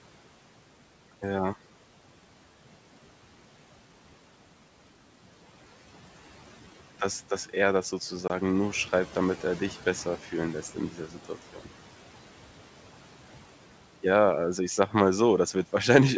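A speech recording over a wideband call, with two kinds of trouble. First there's packet loss on an ADPCM call at 8.28 to 8.31 s: about one packet, roughly 20 ms, drops out as a hard-edged gap, and because the decoder's predictor and step size lose sync with the sender, the sound comes back with slight distortion before settling. Then the noise suppressor cuts into the speech twice, at 10.92 to 11.30 s, dipping by about 8 dB, and at 11.54 to 11.67 s, dipping by about 12 dB. Each time it mistakes a soft stretch of speech for background and turns it down, so roughly a tenth of a second in each spot sounds swallowed and faint.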